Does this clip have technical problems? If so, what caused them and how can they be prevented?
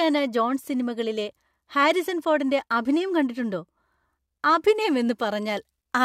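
No, the speech signal shows no audible technical faults at any point, so there is nothing here that needs preventing.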